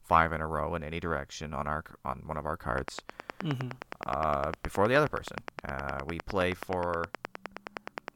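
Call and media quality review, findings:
Train of clicks, 2.78–8.09 s, starting after "on one of our". Regular ticking at 9.6 per second, around fifty pulses, peaking about 15 dB above the speech and audible in pauses. Likely nearby equipment interference or a faulty connection or power supply.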